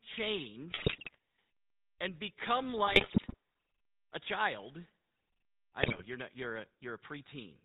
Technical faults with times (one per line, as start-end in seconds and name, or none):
0.00-7.65 GSM full-rate codec
0.70-1.18 GSM bit errors
2.86-3.36 GSM bit errors
5.81-6.05 GSM bit errors